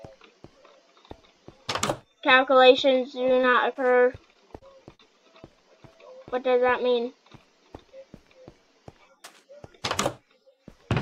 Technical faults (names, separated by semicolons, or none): short concealed packet loss